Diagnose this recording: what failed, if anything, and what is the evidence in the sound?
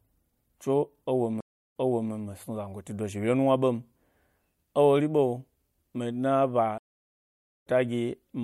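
Stream reconnect, at the network stage. Speech drops out at 1.41 s for 312 ms and resumes 0.41 s earlier. At 6.78 s it drops out for 854 ms and resumes about half a second later. Each break restarts the decoder mid-stream.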